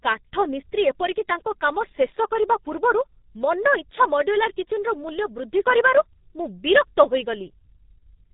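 Speech, carried throughout by the G.723.1 codec with heavy coding damage. Nothing is present above 3.8 kHz, so the sound is muffled and sibilants lose their edge. The codec works in 30 ms frames and rebuilds the voice from a compact model that updates slowly, so consonants smear into neighbouring sounds and voicing takes on a hoarse, buzzy roughness. The degree of damage fits a bitrate of around 6 kbit/s.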